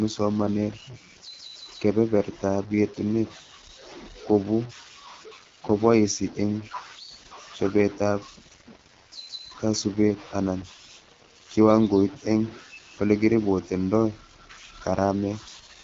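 From start to finish the speech has a grainy, gritty distortion riding on it, and the grit tracks the voice: it gets rougher as the level falls, and the quietest tails break up and sputter instead of fading smoothly. The error sits only about 20 dB under the speech. The likely cause is low bit depth without dither, with samples truncated down to very few bits, something like 6, so the rounding error follows the signal instead of becoming a steady hiss.

On top of that, the whole clip carries the sound of the AMR wideband (HD Voice) codec, and the damage is easy to hear. The voice comes across rough and raspy, which fits one of AMR-WB's lowest rates, around 8.85 kbit/s, where the pulse-driven model of the vocal tract has too little to work with. The top end stops dead at 7.5 kHz, with nothing above that.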